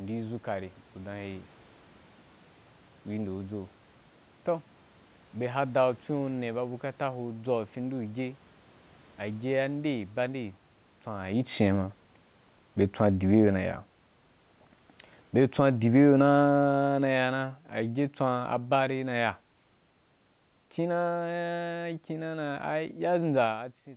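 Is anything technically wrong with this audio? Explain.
Yes, there is one fault. From 15.23 s to 19.37 s the speech sinks steadily by about 8 dB, and the room noise beneath it drops by the same amount, so the whole sound fades rather than just the voice. This is automatic gain falling: the gain control judged the input too loud, or its background noise too strong, and lowered its gain gradually, pulling the speech and background down together. The level shifts around 11 s and near 23.5 s come from the talker moving relative to the microphone, not from the system.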